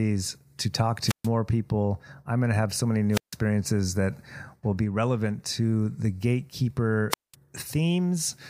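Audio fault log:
1.04–1.29 s, 3.11–3.36 s, 7.10–7.35 s: wireless microphone squelch dropout. Fading radio signal raises hiss until the receiver mutes for 133, 152 and 200 ms; the hiss build-up sets it apart from clean digital gaps.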